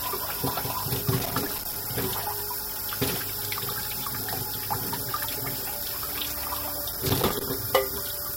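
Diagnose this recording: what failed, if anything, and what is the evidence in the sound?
Analogue wiring: loose connector crackle, irregular scratchy bursts from 1.17 to 1.85 s and 6.93 to 7.43 s, as a dirty contact intermittently breaks, chopping the signal.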